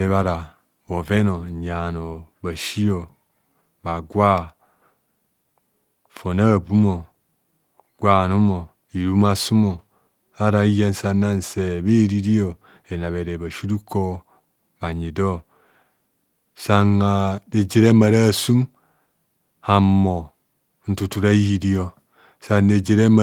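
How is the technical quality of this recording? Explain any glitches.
No glitches turn up anywhere in the recording: the speech comes through with its full audio band intact, and the Opus voice compression it passed through leaves only a light coding imprint.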